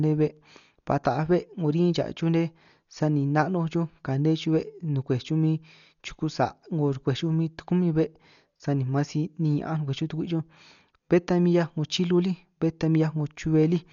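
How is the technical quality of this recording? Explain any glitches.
The recording is heavily degraded. Throughout, the speech sounds dull and muffled, with nothing above 6.9 kHz and a rough, fluttering noise around tones. The likely cause is Dolby Digital compression at a bitrate around 48 kbps, which narrows the band and gives many frequency lines no mantissa bits, which the decoder fills with dither noise.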